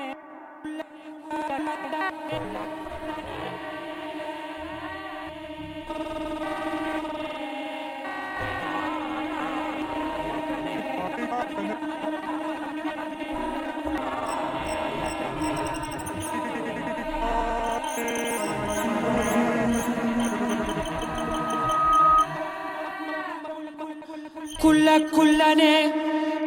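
At 20.88 s a loudspeaker feedback squeal begins. A microphone is picking up the loudspeaker it drives, and at 1.3 kHz the loop gain passes one. That single tone feeds itself and swells over about a second. It peaks at roughly 10 dB above the rest of the sound, a piercing whistle. The squeal stops at 22.26 s, when the loop is broken.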